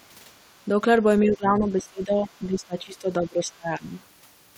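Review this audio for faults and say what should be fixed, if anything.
Speech suppressed in double talk, 1.21 to 3.97 s: the speech level drops by as much as about 20 dB and for about two seconds in total. The likely cause is an echo canceller that could not separate near-end speech from overlapping far-end echo and attenuated both. Tuning the double-talk detector to hold near-end speech during overlap would prevent this.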